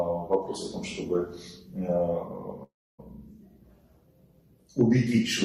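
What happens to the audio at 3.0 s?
A long network dropout runs from 2.63 s to 3.00 s, and 3.0 s is where the audio comes back. The stream likely stopped delivering audio for about 0.36 s. The receiver covered the gap by carrying the last sound forward as a buzzy, fading tail, which decays into roughly 0.28 s of near silence. The sound then resumes abruptly at 3.00 s, with the missing stretch never played.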